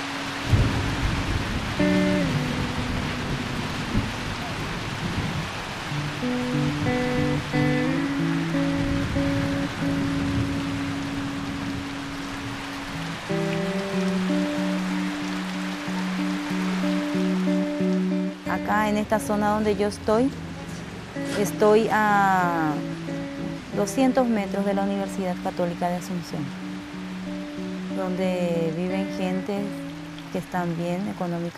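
No technical faults can be heard anywhere in the audio.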